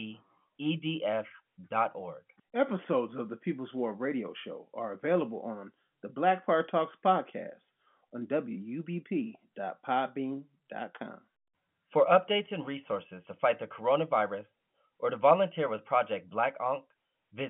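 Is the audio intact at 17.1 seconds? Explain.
Yes, at 17.1 seconds the speech is intact, with no fault at that moment and only the narrow telephone band of the G.711 line coding, which holds nothing above about 3.7 kHz.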